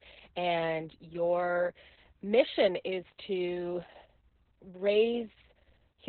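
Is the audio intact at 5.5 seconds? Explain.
No, at 5.5 seconds you're hearing the same Opus voice compression that runs through the whole clip. The speech is squeezed into the SILK linear-prediction mode with a narrowband cut, so there's nothing above about 4.3 kHz, and the excitation is coded very coarsely. The damage is heavy, which fits a bitrate somewhere around 6 kbps. The result is muffled, hoarse speech with a slightly robotic edge.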